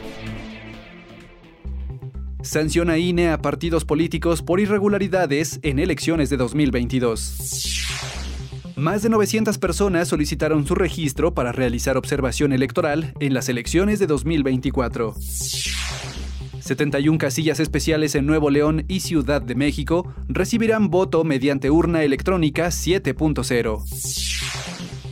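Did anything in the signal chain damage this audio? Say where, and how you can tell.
No, no signal-chain damage audible.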